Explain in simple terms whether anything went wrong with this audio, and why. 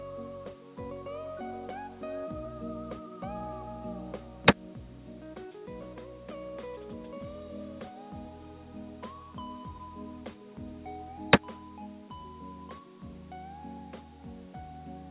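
Something did go wrong, and it lasts through the whole clip. The fault is gain pumping. The level keeps moving on its own. The swing is modest. Loud and soft parts sit closer together, so the sound feels squashed. The likely cause is a microphone gain set far too high, with a fast limiter pulling it back on every peak. The dull, call-like top end comes from the call line itself.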